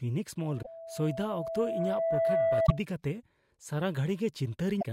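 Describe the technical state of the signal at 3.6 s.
At 3.6 s the speech signal is intact, with no audible fault at that moment.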